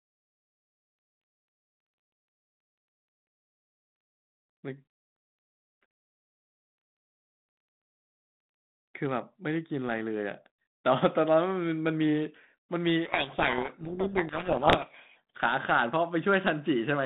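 Codec payload misread from 13.06 to 15.17 s buries the speech in harsh distortion: the G.726 code words are read in the wrong bit order, so the decoder rebuilds false prediction differences. The surrounding speech is telephone-band, about 150 Hz to 3.7 kHz, with the light grain of 32 kbit/s G.726.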